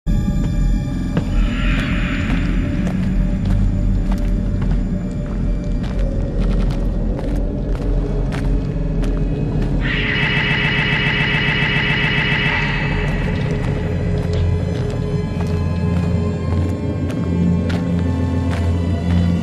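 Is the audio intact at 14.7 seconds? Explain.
Yes, at 14.7 seconds the audio is intact, with no dropout, click, distortion or other fault to be heard at that point.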